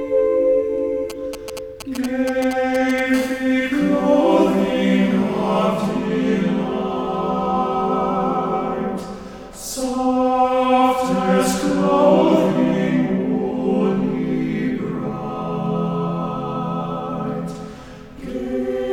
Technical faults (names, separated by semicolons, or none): GSM signalling bursts; GSM phone buzz